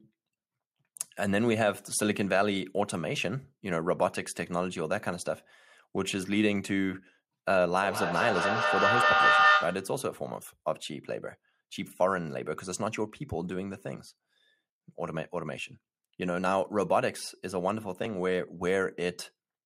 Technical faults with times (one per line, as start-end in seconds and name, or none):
7.83-9.98 feedback echo between two devices